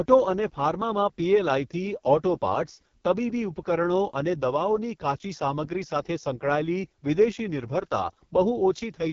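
Throughout, the speech carries heavy AMR wideband (HD Voice) codec damage. It sounds rough and raspy, fitting the lowest 6.6 kbit/s mode. Nothing is heard above 7.3 kHz.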